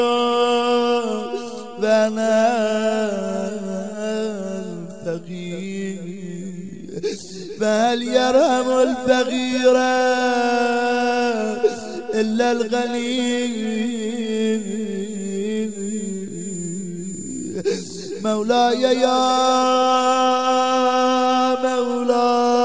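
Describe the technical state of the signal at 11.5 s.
At 11.5 s the signal is intact, with nothing wrong at that point beyond the ordinary character of the call path, whose wideband codec leaves no content above 8 kHz.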